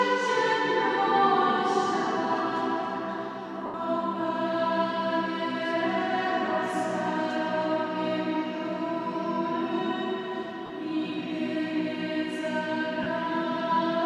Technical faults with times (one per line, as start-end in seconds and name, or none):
3.66-3.74 lost LE Audio frames
10.66-10.70 lost LE Audio frames
13.03-13.06 lost LE Audio frames